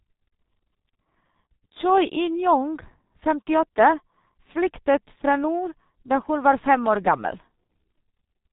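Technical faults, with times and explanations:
Throughout: G.723.1 codec. The speech is muffled and hoarse, with blurred consonants. Nothing passes above 3.8 kHz, so sibilants and crisp onsets are lost. The heavy damage fits a low rate near 6.3 kbit/s, where long 30 ms frames leave the voice model updating too slowly to follow fast changes. On a spectrogram, energy stops at a hard ceiling near 3.8 kHz, and harmonics look smeared in blocks rather than moving smoothly.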